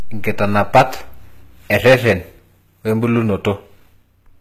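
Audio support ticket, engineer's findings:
Hard clipping at 0.43 to 0.82 s (about 12 dB over) and 1.73 to 2.13 s (about 10 dB over). Harsh fuzz on the speech, with peaks squared off flat. Probably a gain stage or converter driven past full scale.

Nothing above 14.8 kHz, plus low-rate codec artefacts under the MP3. Likely low-bitrate audio saved at a high bitrate. The re-encode can't restore what the earlier codec stripped out.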